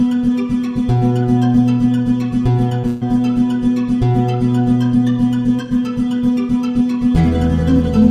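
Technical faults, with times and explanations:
2.69–2.73 s and 2.81–2.85 s, short concealed packet loss: On both occasions about 20 ms of audio arrived too late for the decoder. The receiver covered each hole by extending the last sound it had, for about 12 ms the first time and 25 ms the second, then blended back into the real audio. Each one comes through as a brief smear or wobble, and whatever fell in the missing 20 ms is lost.
2.87–3.03 s, burst of packet loss: Right after the second short loss, about 140 ms of audio failed to arrive, most likely several consecutive packets. The receiver filled the whole 140 ms by prolonging the last sound and fading it as the gap went on, with no silent stretch. It is heard as a held buzz or dying hiss. The audio then resumes with the material from that stretch gone.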